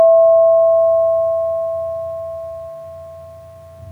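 No dropouts, distortion, timing slips or other transport or processing faults turn up anywhere in the recording.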